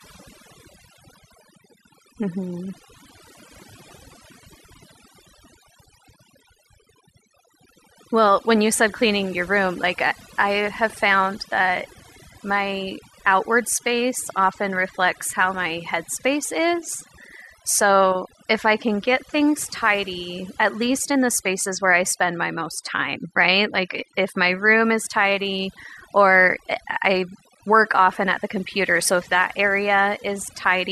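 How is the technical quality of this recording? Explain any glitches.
The technical quality suffers from one problem across the whole recording: overdone noise removal. The background drops and breaks up into twinkling specks. Noise reduction set too strong shuts off individual frequency bands near its noise estimate, taking quiet parts of the speech along with them.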